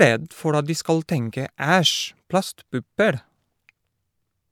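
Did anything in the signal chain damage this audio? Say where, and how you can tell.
No, the speech signal shows no damage from any stage of the chain, with level, continuity and tonal balance holding steady throughout.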